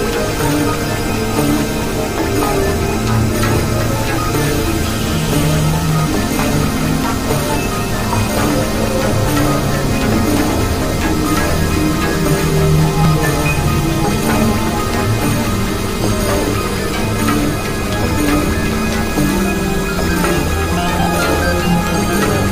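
From 5.89 to 7.42 s a gritty, tearing crackle rides on the sound. This is processor overload crackle: dozens of very short buffers, each well under a millisecond, miss their deadlines and drop out as tiny silent gaps with hard edges.

Brief clicks or micro-skips then occur at 13.05, 17.05 and 21.03 s, spaced 4 s apart. This is overlap between stream segments: the timestamps of adjacent 4 s segments overlap, so about 5 to 11 ms of audio are trimmed away and the waveform jumps.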